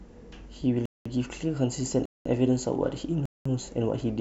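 At 0.86, 2.06 and 3.26 s the speech stops dead for 0.2 s each time. This is a gap between chunks. The audio arrives in 1 s pieces with silence padded between them. Nothing is lost, but each join leaves a hard-edged hole.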